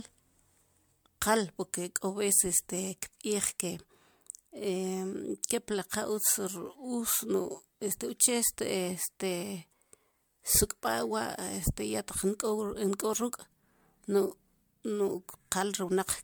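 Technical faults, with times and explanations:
Throughout, generation loss: the speech was likely encoded as MP3 about three times, each pass requantising afresh, leaving swirly, hollow, smeared sound with blurred attacks.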